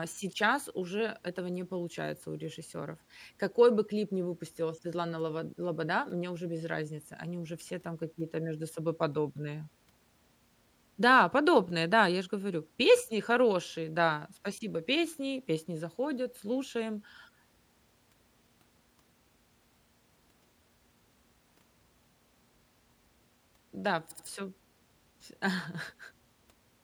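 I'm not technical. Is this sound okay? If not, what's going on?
No, there's a stutter: around 24.10 to 24.26 s, repeated frames make the same 78 ms snippet of speech play twice more, adding 0.16 s.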